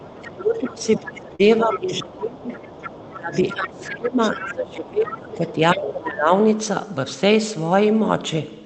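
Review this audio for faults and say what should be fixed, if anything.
A second voice sits under the speech from 0.00 to 1.21 s, 1.58 to 2.04 s, 2.42 to 4.54 s, 5.08 to 5.16 s and 5.48 to 5.77 s, around 10 to 20 dB down. This is likely the other side's voice leaking through, because the echo canceller left loudspeaker sound in the microphone. Unlike crosstalk, it tracks the far end's speech. Better acoustic coupling estimation and a stronger residual echo suppressor would prevent it.

From 0.19 to 6.32 s, the talker's level dips, by up to roughly 20 dB, for about five seconds in total. This is likely speech suppressed in double talk: both sides spoke, and the canceller turned everything down. Packet loss removes sound briefly, but these dips follow the overlap. Double-talk detection that protects near-end speech would prevent them.

Between 1.35 and 1.41 s, a brief smear replaces the audio. 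This is short concealed packet loss: about 40 ms never arrived, and roughly 37 ms of it was synthesized from the preceding sound. It is far shorter than the suppression dips and is not tied to overlap. A deeper jitter buffer or forward error correction would prevent it.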